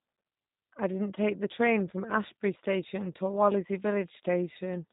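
Speech runs through the G.729 codec for its whole length, with nothing above 3.8 kHz and a plainly rough, synthetic texture. Unlike a simple telephone band-limit, the buzz comes from rebuilding each frame with a few pulses, which fits 8 kbit/s coding.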